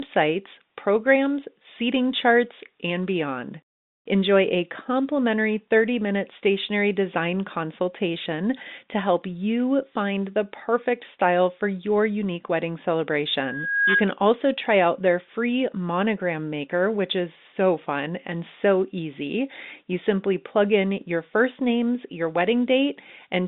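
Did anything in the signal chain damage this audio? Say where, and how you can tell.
Yes: loudspeaker feedback squeal at the acoustic loop, 13.41 to 14.08 s, before "also try out their". A 1.6 kHz tone swells over about half a second to roughly 5 dB above the speech, showing as one bright horizontal spectrogram line.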